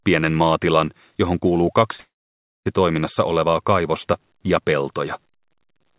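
At 1.96 s a short stall from a late packet holds the sound for about 26 ms, until 2.01 s. The receiver ran dry and stretched the last fragment, so nothing is lost. A spectrogram shows briefly smeared, repeated harmonics, and the waveform shows a held, slightly buzzy cycle.

A call audio freeze follows immediately, from 2.01 s to 2.68 s, filling about 649 ms. The last sound continues as a fading buzz, then about 570 ms of silence, and the audio resumes where it stopped with nothing missing. The likely cause is packets held up in transit, emptying the jitter buffer. The spectrogram shows a decaying band followed by a blank gap, and the waveform collapses to flat. Through both faults nothing appears above 4 kHz, as expected from the G.711 A-law call codec.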